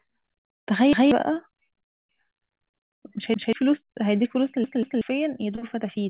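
A repeated buffer at 0.93 to 1.12 s: fresh audio arrived late, so a 186 ms block (consistent with an 8192-sample buffer) plays a second time, giving a hard-edged stutter and skipping about a fifth of a second of speech.

Short concealed packet loss at 1.34 to 1.38 s: roughly 20 ms never reached the decoder, and the receiver extrapolated from the preceding sound before blending back, leaving a brief smear.

A repeated buffer recurs at 3.34 to 3.53 s, the same 186 ms block sounding twice with an abrupt join and about 200 ms of speech lost.

The longest repeated buffer runs from 4.64 to 5.01 s: the block plays three times in all, a stuttering loop that swallows roughly 400 ms. Through all of this the narrowband call path keeps the band below 4 kHz, which points to G.711-style telephone coding.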